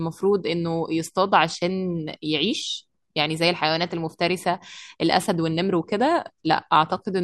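Nothing in the recorded speech registers as a technical fault at any point in the clip.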